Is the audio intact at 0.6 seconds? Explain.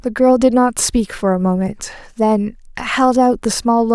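Yes, the speech at 0.6 seconds is intact, with no dropout, click, distortion or other fault at that point.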